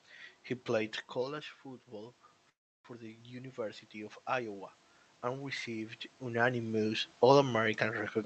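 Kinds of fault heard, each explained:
Automatic gain rising: After the talker moves back at about 1 s, the input drops by about 10 dB. The gain control then lifts the level slowly, about 7 dB from 1.14 s to 6.67 s. Speech and room noise swell together.
Call audio freeze: From 2.49 s to 2.87 s the sound stalls. A brief continuation fades, then about 320 ms of silence follows. Speech resumes where it stopped, about 350 ms late, with nothing lost. Packets held up in transit likely emptied the jitter buffer.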